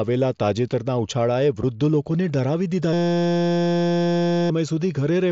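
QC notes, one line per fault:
1.62 s, unconcealed Bluetooth headset packet loss: a tiny, sharp gap in the speech just before "લોકોને ડરાવી". About 7.5 ms of audio vanishes, roughly one wideband headset packet on this mSBC link. Nothing was filled in to cover it, so the signal drops to silence or an idle pattern and snaps back with hard edges.
2.93–4.50 s, system hang loop: the speech stops and is replaced by a steady buzz at about 172 Hz lasting about a second and a half. The system froze while the sound hardware kept replaying the same 5.8 ms slice of audio, which fits a 256-sample buffer, some 270 times over. Because the repeated piece is so short, the repeats fuse into a pitched tone at the loop rate instead of an audible stutter. The speech that should have played there is lost.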